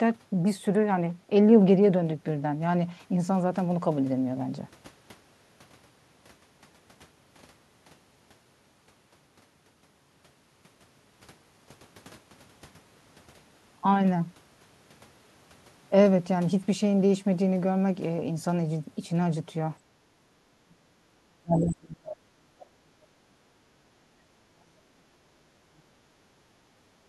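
From 19.79 to 23.39 s the talker gets pushed down hard, roughly 40 dB at worst: speech suppressed in double talk, likely the echo canceller ducking both voices. Inside that, around 21.59 to 21.64 s, a short scrap of the other side's voice leaks through, about 15 dB below the talker, likely an echo residue. The same double-talk suppression hits again from 23.81 to 25.96 s. Then the background gets gated by the echo canceller, dipping about 9 dB from 26.44 to 26.86 s and about 6 dB from 27.03 s to the end.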